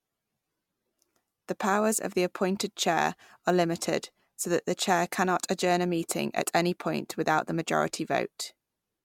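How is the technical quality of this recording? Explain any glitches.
No technical faults or glitches are audible anywhere in the recording.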